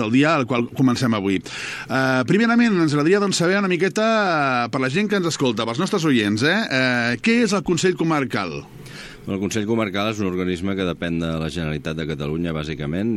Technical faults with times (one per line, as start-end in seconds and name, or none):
none